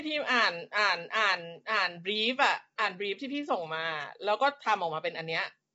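From start to finish the speech has a rough, grainy edge, with a hiss filling the gaps between the voice's harmonics and nothing at all above about 7.8 kHz. That points to low-delay AAC compression, likely AAC-ELD at a low bitrate, something around 24 kbps. Its short frames can't pin down the pitch harmonics cleanly, so the voice smears into that coarse texture, and the damage is plainly audible the whole way through.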